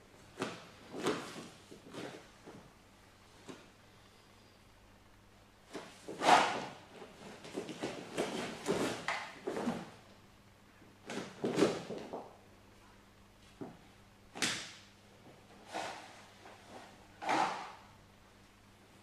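No technical faults can be heard at any point in the clip.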